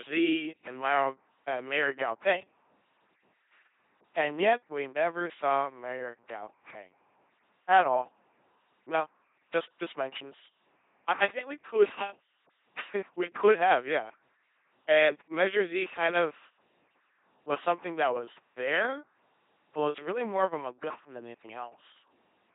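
From start to finish, the speech passes through an LPC-10 vocoder at 2.4 kbit/s, and the damage is heavy. Each short frame is rebuilt by a simple vocal tract filter. That filter is excited either by a pulse train or by noise, never by a mix of the two. The result is a buzzing, mechanical robot voice. Where the voicing choice goes wrong, buzz or hiss cuts in. Nothing is left above 3.8 kHz.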